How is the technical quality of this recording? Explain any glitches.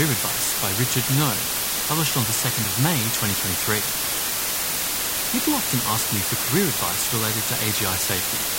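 Poor: a heavy, constant hiss sits on the speech for the whole clip.

Low bit depth with dither runs from start to finish. The signal has been reduced to very few amplitude steps, which fits roughly 3-bit quantisation, and random dither was added before rounding, so the error comes out as even white noise rather than harsh distortion. That hiss is about as loud as the speech itself, a steady, flat wash that never pumps or crackles but badly masks the voice throughout.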